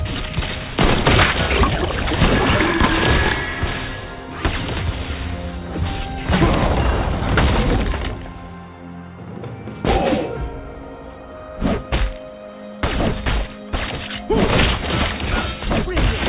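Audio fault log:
Nothing stood out on listening to this audio.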